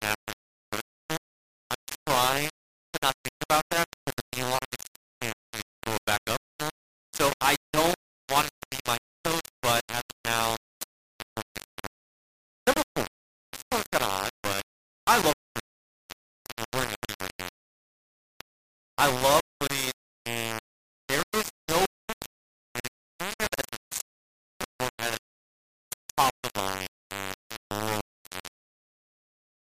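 The whole audio is coated in a harsh, grainy distortion that rises and falls with the sound, with a crunching error nearly as loud as the sound itself and quiet passages breaking up or dropping out. This is likely low bit depth without dither, consistent with rounding to about 3 bits.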